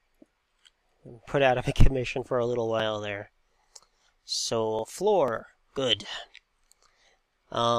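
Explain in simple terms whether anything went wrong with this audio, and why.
From 0.32 s to 7.27 s there's a steady tick about every half second (0.50 s apart). Those are periodic USB or driver dropouts: something keeps stalling the audio connection, and each time a few milliseconds of sound get skipped.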